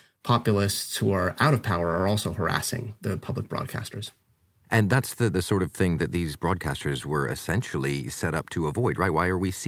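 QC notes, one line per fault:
No technical faults were found anywhere in the signal.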